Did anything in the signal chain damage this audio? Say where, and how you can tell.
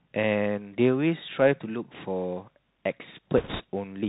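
Yes. The Bluetooth CVSD headset codec is at work throughout the clip, and it damages the audio at the codec stage. Nothing reaches above 4 kHz. On loud, bright passages the delta modulator's step cannot keep pace, so the peaks smear into distortion and s sounds come out scratchy. A grainy hiss sits under the speech. All of this fits a 64 kbps CVSD stream, which sends one up-or-down bit per sample with an adaptive step size.

Bit errors on a Bluetooth voice link appear at the network stage from 3.38 to 3.63 s. In that quarter second a rushing, crackly noise swells over the speech, but there are no sharp clicks. That pattern points to flipped bits in the CVSD stream. Each bit carries only a small increment and the decoder's errors fade out, so a bit error rate of a few percent shows up as texture and not as pops.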